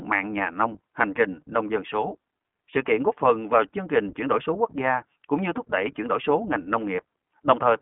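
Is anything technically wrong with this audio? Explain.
Yes. Throughout, the speech carries iLBC codec coding: nothing passes above about 3.8 kHz, and each short frame, which fits 20 ms blocks, is coded on its own, leaving a plainly rough, synthetic texture. A simple telephone band-limit would sound narrow but clean.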